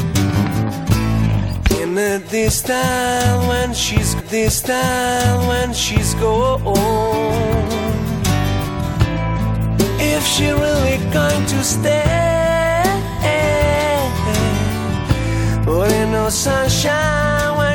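At 4.19 s a stream segment repeated: the player queued the same two-second chunk twice, so the sound jumps back with a small blip and replays.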